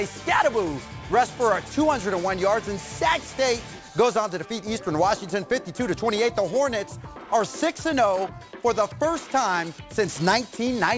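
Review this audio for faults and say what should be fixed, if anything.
Aliasing runs throughout the clip. Content above about 8 kHz has folded back below that edge as gritty, metallic tones at unrelated pitches, roughly 20 dB under the main signal. This fits a drop from 48 kHz to 16 kHz without filtering first. To prevent it, apply a steep low-pass filter below 8 kHz before downsampling, or use a proper resampler that filters for you.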